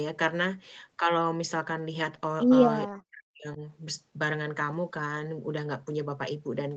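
A speech recording in which the talker's level collapses from 2.87 to 3.62 s, sinking by about 40 dB at its deepest over roughly 0.7 s, which is speech suppressed in double talk. The likely cause is an echo canceller that heard both ends talking at once and ducked the near talker along with the echo. On the waveform the envelope pinches almost flat there. On a spectrogram that stretch fades to a dim band beneath an 8 kHz ceiling.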